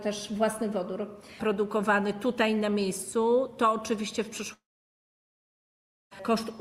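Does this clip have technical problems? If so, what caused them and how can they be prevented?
Yes. From 4.53 s to 6.13 s the sound breaks off. The last moment trails into a short fading buzz, then about 1.5 s of near silence follows, and the audio resumes with about 1.58 s missing. This is likely a long network dropout: nothing arrived for that stretch, and the receiver's concealment soon gave out. A more stable connection, backed by forward error correction or retransmission and a larger jitter buffer, would prevent it.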